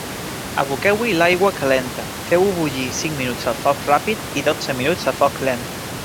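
Nothing in the system goes wrong here, so there are no technical faults to point to, just the room's own background noise sitting quietly under the speech at about 14 dB down, as part of the recording itself.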